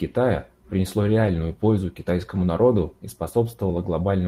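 At 1.23 to 1.29 s, and again at 2.35 to 2.41 s just before "народу и", the speech briefly turns rougher and noisier without any gap or dropout. Both are a lost packet rebuilt from error correction: the decoder filled each hole with the low-bitrate backup copy carried in the following packet. Each patch covers about 40 ms, which fits two separate 20 ms packets lost and then reconstructed from that coarser redundant data.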